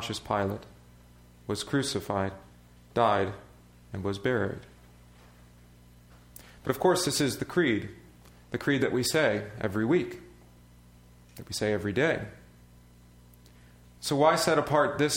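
No technical faults can be heard anywhere in the audio, and the signal holds steady throughout with nothing breaking into it.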